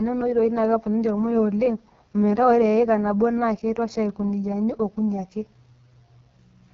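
From start to finish the speech carries the AMR wideband (HD Voice) codec sound at its rough end. It's raspy and buzzy, which fits the lowest 6.6 kbit/s mode, where the vocal-tract model gets too few bits. The top stops near 7.1 kHz, with noise filling the highest band.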